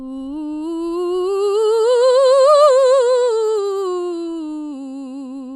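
MP2 compression damage runs through the whole music clip, likely from MPEG Layer II coding at a low rate, which fits roughly 80 kbps. Starved of bits, upper sub-bands drop out and flicker, leaving a dull top and a plainly audible gurgling, granular roughness.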